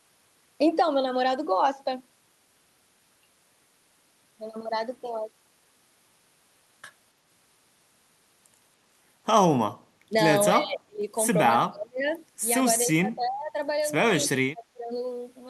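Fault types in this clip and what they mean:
Speech suppressed in double talk: The speech dips by about 10 to 35 dB in short bursts between 10.1 and 14.9 s. An echo canceller likely turned it down.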